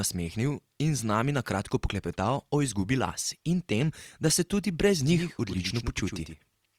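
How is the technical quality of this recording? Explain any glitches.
The recording has one clear fault: a doubled audio track from 5.07 s through to the end. At that point a second copy of the speech appears abruptly, trailing the original by about a tenth of a second and sitting roughly 10 dB lower. It is likely a second, slower capture path mixed in alongside the main one. The copy is full-band and dry, with no decay or room colour, so it reads as a faint, fixed slapback echo rather than natural reverberation.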